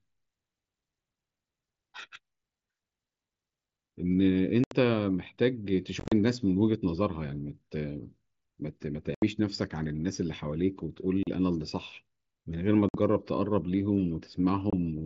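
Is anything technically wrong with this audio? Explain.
Yes. Unconcealed Bluetooth headset packet loss cuts holes into the speech at 4.64 s (75 ms), 6.00 s (90 ms scattered over 120 ms), 9.15 s (75 ms), 11.23 s (38 ms), 12.89 s (53 ms) and 14.70 s (23 ms). Voice packets between headset and phone went missing and were replaced with silence or an idle pattern rather than patched over, so each gap starts and stops abruptly. The one at 6.00 s sounds choppy and broken up rather than a single clean dropout. The wideband mSBC link adds a light graininess on loud sounds.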